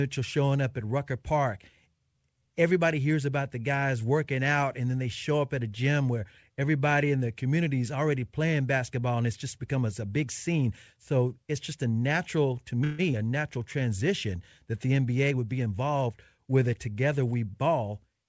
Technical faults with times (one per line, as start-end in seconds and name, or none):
12.84-13.01 call audio freeze
13.13-13.15 short concealed packet loss
15.28-16.48 jitter buffer speed-up